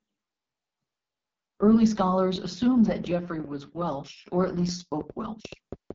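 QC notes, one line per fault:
Throughout: AMR wideband (HD Voice) codec at 6.6 kbit/s, the lowest rate. At this rate the speech model has very few bits to describe each frame. Its pulse-based excitation and vocal tract shape come out coarse, so the speech sounds rough and raspy throughout. Detail is modelled only up to 6.4 kHz, and the band above is filled with shaped noise rather than real content. Nothing is present above about 7.7 kHz.
2.36 to 5.92 s: train of clicks. Repeated pulses of much the same shape ride over the speech at an uneven pace, around 4.8 per second, roughly twenty in all. They peak about 5 dB above the speech, so they stand out as sharp ticking and popping through both talk and pauses. The likely cause is interference from nearby equipment or a faulty connection or power supply.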